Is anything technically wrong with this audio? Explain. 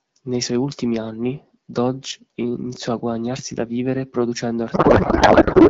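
Yes. A codec payload misread begins at 4.73 s and runs to the end of the clip at 5.69 s. The receiving decoder is parsing AMR frames with the bit fields in the wrong positions, which points to octet-aligned AMR being read as bandwidth-efficient. Each frame still decodes, but into the wrong parameters. From 4.73 s the speech gives way to garbled noise and warble that barely tracks it. Before that point the AMR wideband (HD Voice) coding sounds clear, consistent with a rate around 12.65 kbit/s.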